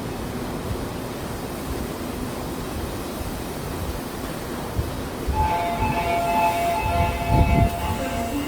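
Throughout, the sound turns grainy and rough, likely from Opus compression at a low bitrate near 24 kbps; a spectrogram shows noise-filled bands extending to 20.3 kHz.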